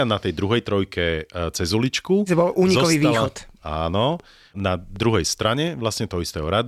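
From 2.83 s to 6.44 s the speech picks up a train of clicks: roughly ten similar pops at about 3 per second, unevenly spaced, peaking about level with the speech and ticking through the pauses too. Likely interference from nearby gear or a faulty connection or power supply.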